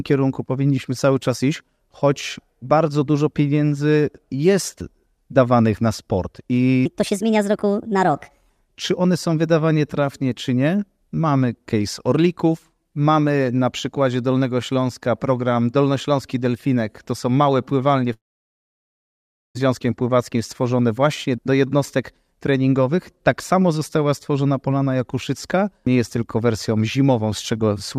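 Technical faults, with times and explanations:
6.86–8.50 s, section at the wrong speed: right after "jest dawanych na sport" the speech runs 1.37 times too fast and about five semitones high, likely from playback fitted to the wrong clock. Pitch and pace rise together, unlike a pitch-only glitch that leaves timing intact.
18.13–19.57 s, long network dropout: after "są małe pływalnie" a brief fading fill gives way to about 1.37 s of silence, likely because packets never arrived. Speech resumes with 1.42 s skipped, so unlike a stall, nothing is delayed and the lost part never returns.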